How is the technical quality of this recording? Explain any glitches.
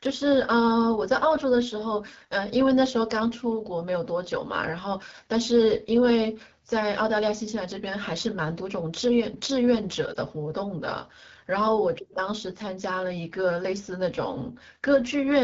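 The quality is limited: the whole clip carries clear low-rate codec damage, plus one short glitch near the ten-second mark.

Throughout, this is the AMR wideband (HD Voice) codec working hard. The rough, raspy edge on the speech fits AMR-WB at one of its lowest rates, around 8.85 kbit/s. At that rate the vocal tract model and pulse excitation can't capture the voice cleanly below 6.4 kHz, and the 6.4 to 7 kHz band is just shaped noise.

From 10.13 to 10.17 s there's a lost AMR speech frame, a gap of about 20 ms, which fits a single dropped frame. The decoder filled in by repeating the last good pitch and vocal tract settings at reduced gain, so you hear a quick dip or warble rather than a hard dropout.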